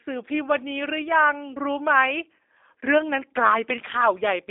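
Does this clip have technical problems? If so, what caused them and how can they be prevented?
Yes. The speech runs through a G.729 codec from start to finish, likely G.729A at 8 kbit/s. It has a narrow 300 Hz to 3.7 kHz telephone band, nothing above 3.8 kHz, and a plainly rough, synthetic edge from the filter-and-pulse reconstruction. To prevent it, record or route the call through a wideband codec instead.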